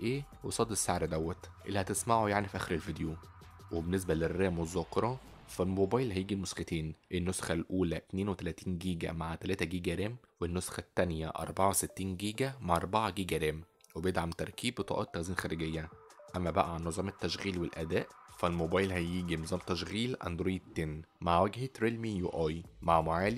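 From 11.38 to 14.70 s, pre-emphasis is left on: the treble boost, shaped like the CD 50/15 µs curve, was never undone, lifting 10 kHz about 8 dB above 1 kHz. The sound turns thin, bright and sibilant, and a spectrogram shows a clearly brighter band above a few kHz over that span.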